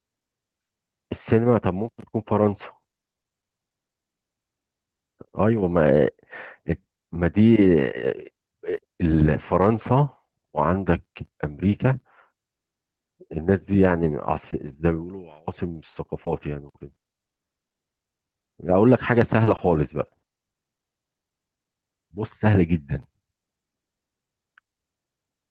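Repeated packet loss (robotic sound) hits the speech at 1.81–5.60 s, 14.04–18.44 s and 19.44–21.84 s. Holes of up to 40 ms are patched by stretching the preceding sound. Unlike a single dropout, the gaps recur rapidly, giving a choppy texture with pieces missing throughout each stretch.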